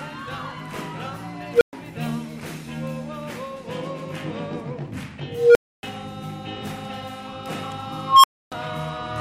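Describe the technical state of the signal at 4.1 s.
At 4.1 s the signal is intact, with no audible dropout, distortion, clipping or other technical fault.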